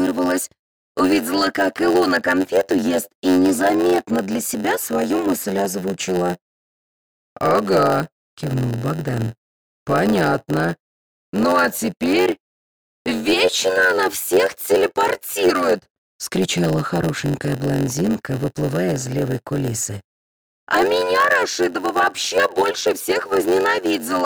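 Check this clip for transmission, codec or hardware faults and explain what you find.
A block size mismatch (padded) runs through the whole clip. One stage hands over blocks shorter than the next stage expects, and the missing part of each block is filled with silence. Those zero-filled gaps recur about 91.9 times a second, producing a steady buzz at 91.9 Hz over the sound. Because silence is inserted into every block, the audio plays at 0.919 times normal speed. That fits written blocks roughly 92% the size of the blocks read. The timbre stays.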